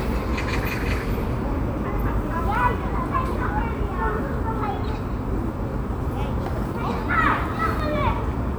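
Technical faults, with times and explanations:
2.55 s and 7.80 s, dropped samples: the stream likely lost a fraction of a millisecond of samples at each point. The waveform jumps straight to a later value, which is heard as a single sharp click and seen as a thin vertical line across the spectrum.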